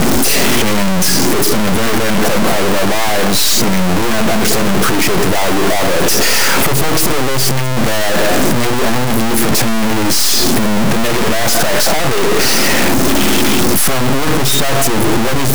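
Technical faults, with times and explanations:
Throughout, stuck bit: harsh, buzzy distortion rides on the speech and pauses fill with loud noise, likely from one high-order data bit held fixed, its step near -5 dBFS. The waveform shows sudden offset jumps, and the spectrogram shows broadband hash even in gaps.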